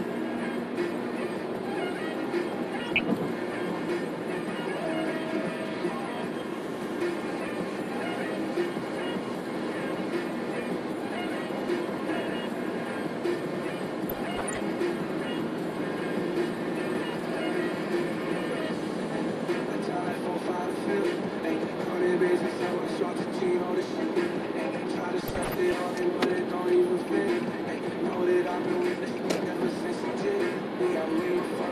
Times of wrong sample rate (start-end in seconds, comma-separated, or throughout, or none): none